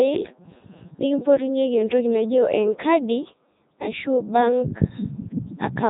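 The speech in this clip has been carried through a Codec 2 vocoder for its whole length, at a rate that points to the 3.2 kbit/s mode. Instead of the waveform, only pitch, voicing, energy and a coarse spectral envelope survived, and the decoder rebuilt the voice from sine waves. The result is heavily damaged: robotic and buzzy, with nothing above 3.8 kHz throughout.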